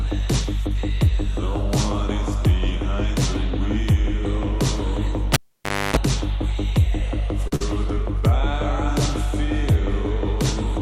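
At 5.34 s the cable is pulled and plugged in while live. A pop opens a stretch of about 0.58 s near silence. A 50 Hz mains buzz lasts about 0.29 s while only the tip touches. Another pop brings the sound back at 5.97 s.

At 7.47 s there is a short stall from a late packet. The jitter buffer ran dry, so the last sound is held for 42 ms. It then resumes from the same point. Nothing is lost, but that moment drags slightly.

From 7.56 to 7.62 s comes a burst of packet loss. The receiver stretches the last sound for 47 ms and fades it into a dull hold. Playback then jumps ahead. About 40 ms of audio is missing.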